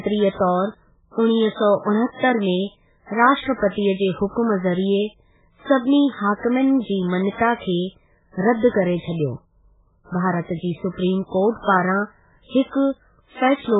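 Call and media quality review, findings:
MP3 compression, whole clip: speech sounds watery and swirly, nothing above 3.8 kHz, heavy smearing on attacks. Likely an MP3 encoder starved of bits, fitting a very low bitrate around 8 kbps, cutting treble and flickering weak frequency lines.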